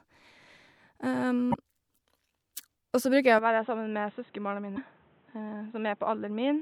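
At 1.50 to 1.54 s, damaged data in a compressed stream makes the decoder misread a run of frames and hunt for the next valid header. The result is a brief glitch. On a spectrogram it shows as a short vertical smear of broadband energy, and the waveform has an abrupt discontinuity.

From 3.39 s to the end, the speech turns dull and boxy with no gap at the change, most likely because the input switched to a poorer device. Everything above 3.9 kHz vanishes, leaving a flat ceiling on the spectrogram. The waveform envelope steps down about 5 dB, and a new noise floor sits roughly 35 dB below the speech.

At 4.74 to 4.78 s, the same stream damage recurs inside the narrowed band, producing another brief glitch. It appears as a thin vertical streak on the spectrogram and a jagged break in the waveform.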